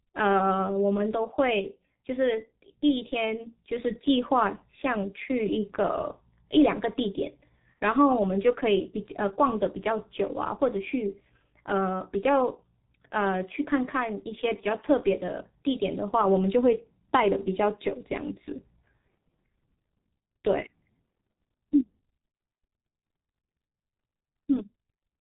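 G.723.1 codec damage runs through the whole speech clip. Nothing passes above 3.8 kHz, so the speech sounds muffled. The damage is heavy, which fits a rate near 6 kbit/s. Coarse frames smear consonants, and the voice turns hoarse and blurred.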